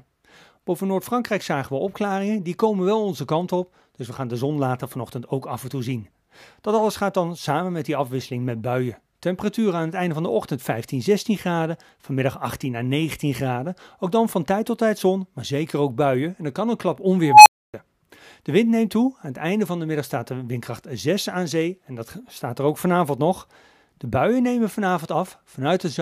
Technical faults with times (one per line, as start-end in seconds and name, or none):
17.23-17.74 unstable filter